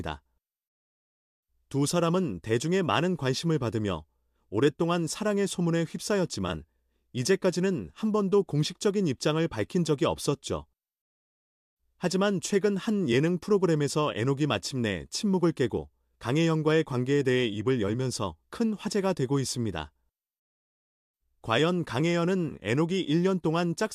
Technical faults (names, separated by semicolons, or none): none